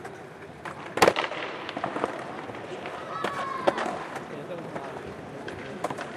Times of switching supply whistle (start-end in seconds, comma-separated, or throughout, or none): none